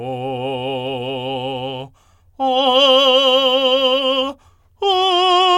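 No technical faults can be heard in the music.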